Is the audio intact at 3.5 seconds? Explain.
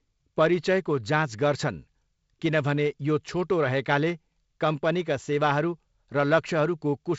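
Yes, the audio is intact at 3.5 seconds, with no dropout, click or other fault at that moment.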